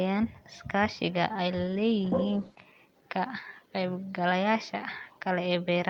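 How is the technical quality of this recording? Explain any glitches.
There's one glitch, a call bitrate drop from 1.52 to 2.71 s. The connection's bandwidth estimate dipped, so the encoder got far fewer bits to work with. The sound fits a fall from around 48 kbps to about 14 kbps, held at the bottom for roughly 1.1 s. With so few bits, the speech is coded more coarsely and takes on a rough, watery edge. The audio bandwidth also narrows from 20 kHz to 12 kHz, which dulls the top end until the rate recovers.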